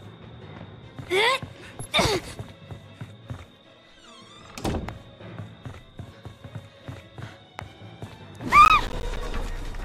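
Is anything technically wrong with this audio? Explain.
Yes. Processor overload crackle, 8.65 to 9.17 s: overloaded processing misses about ten buffer deadlines of around 10 ms, each leaving a hard-edged silent gap, heard as gritty crackle.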